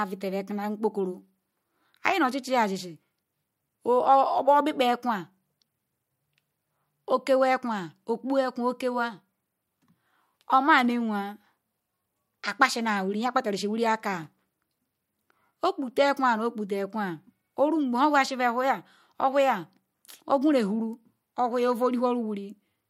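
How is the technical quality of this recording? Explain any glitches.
No technical faults can be heard in this recording.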